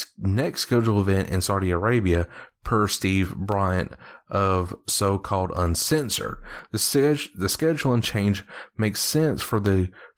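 From 0.44 s to 9.66 s, periodic USB or driver dropouts recur every 1.02 s. Each time, a blocked bus or driver loses a tiny sliver of audio, far under a millisecond, and silence fills the gap. This causes a regular tick during the speech.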